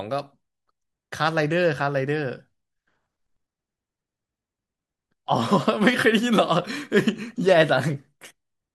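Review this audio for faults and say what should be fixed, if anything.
No faults turn up anywhere in this speech recording, so nothing needs fixing. It can be used as it stands without changes to the capture or processing chain.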